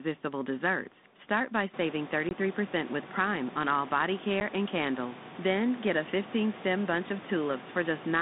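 At 2.29 to 2.31 s and 4.40 to 4.42 s, packet loss on an ADPCM call leaves hard-edged silent gaps, which fits one or two lost packets. Unlike a clean dropout, sound returns with brief distortion until the decoder's predictor and step size resynchronise.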